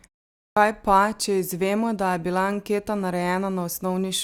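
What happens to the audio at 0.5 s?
At 0.5 s, after half a second of silence, the output has a clipped start after a pause. The device is still waking, so about 65 ms of speech, 0.50 to 0.57 s, is swallowed and the speech bursts in abruptly. Muted pauses would drop only background and never cut speech.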